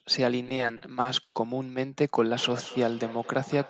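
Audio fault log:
0.43–1.36 s: repeated stalls (stutter). Eight times the incoming audio ran short and the last sound was stretched to cover the wait, the longest about 90 ms, together about 220 ms or a quarter of the span. Nothing is lost, so unlike dropouts, it drags rather than skips.
2.30–3.70 s: feedback echo between two devices. Another device in the room replayed this sound into the microphone, so it comes round again at a steady interval of about a fifth of a second, thinner and ringing, peaking about 17 dB below the speech. Unlike room reverberation, the repeats are distinct.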